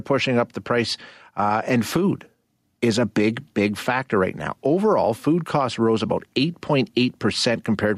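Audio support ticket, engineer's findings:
Gain pumping throughout the speech. Level swing of about 5 dB. Dynamics squashed. Likely cause: input gain set far too high, with a fast limiter or compressor clamping every peak.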